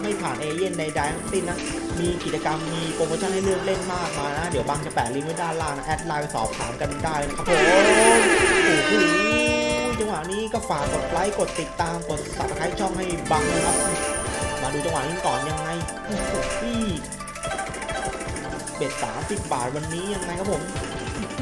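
Nothing in the audio points to a technical fault: the signal holds steady throughout, with no interruptions, level jumps or other disturbances to report.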